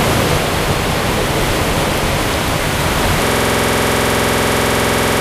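At 3.26 s a system hang loop starts: the buffer cycles a 46 ms slice about 42 times, a 21.5 Hz stutter-buzz running to the end, which fits a 2048-sample buffer.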